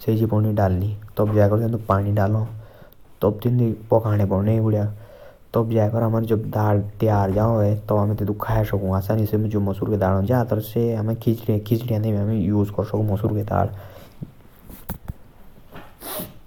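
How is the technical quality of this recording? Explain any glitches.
No technical faults are audible.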